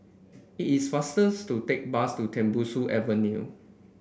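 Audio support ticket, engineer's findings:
No audible faults found in the speech recording.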